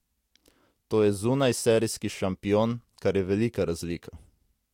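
No technical faults can be heard anywhere in the speech recording; the signal stays continuous and stable throughout.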